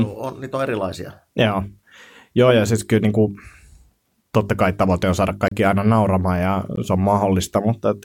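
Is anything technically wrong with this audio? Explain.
Yes. The speech contains two blocks of digital silence, most likely where the playback or processing chain failed to deliver samples in time and zeros went out in their place. The first, from 5.48 to 5.52 s, lasts 32 ms, just after "kai tavoite on saada" and before "aina nauramaan ja se". The second, at 6.76 s and about 14 ms long, falls between "aina nauramaan ja" and "se on". The signal drops abruptly to silence and jumps back with no fade. The longer gap is heard as a brief hole, the shorter one as a tick.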